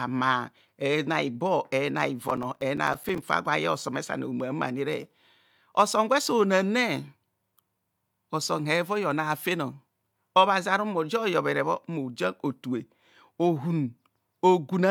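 Speech clip with a burst of processor overload crackle from 2.28 to 3.22 s, after "ibor ena": roughly twenty missed buffers of about 5 ms each drop to silence, producing gritty tearing.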